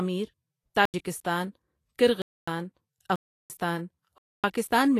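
Throughout, the speech carries hiss and graininess, with roughened tones and smeared consonant onsets, likely from Vorbis compression at a low setting, which fits a bitrate near 33 kbps. Coarsely quantised treble becomes noise, and a spectrogram shows nothing above 14.2 kHz.

Blocks of digital silence cut in at 0.85–0.94 s (85 ms), 2.22–2.48 s (256 ms), 3.16–3.50 s (341 ms) and 4.18–4.44 s (256 ms). The sound cuts out without fades; waveforms show flat lines, spectrograms blank vertical bands. The shortest fits a 4096-sample block.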